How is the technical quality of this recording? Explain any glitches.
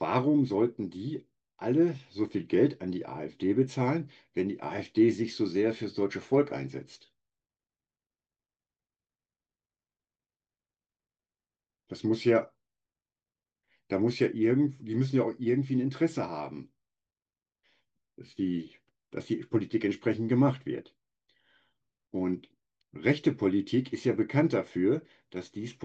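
No technical faults are audible anywhere in the speech recording.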